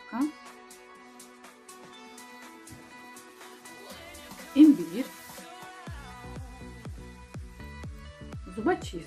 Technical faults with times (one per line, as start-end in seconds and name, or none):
0.00-9.06 MP2 compression